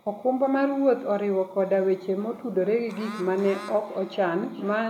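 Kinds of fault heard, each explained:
Feedback echo between two devices: from 2.19 s to the end, speech comes back as a faint repeat roughly every 0.4 s, peaking about 22 dB below the speech. A nearby second device plays the call aloud, and this microphone picks it up again, which its own echo canceller cannot remove.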